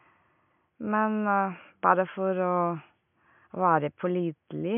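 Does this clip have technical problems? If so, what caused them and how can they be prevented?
No, this clip has no technical problems, so there is nothing to prevent.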